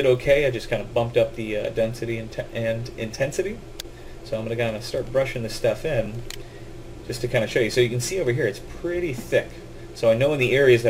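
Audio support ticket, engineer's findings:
Brief click at 6.06 s, hard-edged. Repeated buffer: new audio arrived late, so the output device replayed its last block once, a 5.8 ms piece heard twice with a hard join. Fits a 256-sample buffer. Essentially no audio lost.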